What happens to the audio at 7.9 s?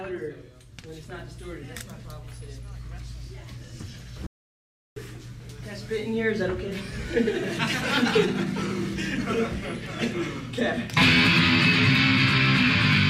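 Nothing goes wrong at 7.9 s; the audio runs through that moment intact, with no dropout, click, glitch or other audible fault.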